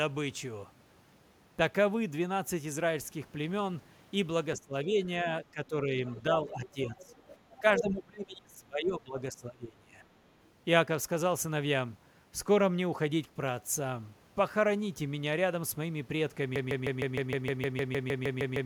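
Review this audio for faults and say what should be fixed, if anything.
Speech suppressed in double talk, at 4.56–4.99 s, 5.52–5.98 s, 6.5–7.15 s and 7.6–9.98 s. The speech sinks by roughly 20, 10, 15 and 25 dB. The longest stretch, nearly two seconds of dropouts, falls in the last span. This is likely an echo canceller that couldn't tell the near talker from loudspeaker echo while both sides spoke, so it turned everything down. To prevent it, tune the canceller's double-talk detection so it keeps the near talker open when both sides speak.

The other side's voice is leaking through at 6.08–6.22 s, 7.0–7.19 s, 7.55–7.6 s and 7.78–7.91 s. It arrives in short scraps, mostly faint, about 20 to 25 dB under the speech, but the last scrap comes through at roughly the same level as the talker. The likely cause is residual loudspeaker echo that the canceller failed to remove from the microphone. 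To prevent it, improve echo-path adaptation or lower loudspeaker level relative to the microphone.

Broken-record loop, from 16.56 s to the end. A 154 ms fragment repeats back to back 14 times. The audio that should have played there is gone. The likely cause is a stall in the player, encoder or stream, which kept resending the last buffered piece instead of new audio. To prevent it, detect stalls and output silence or conceal the gap rather than repeating the held buffer.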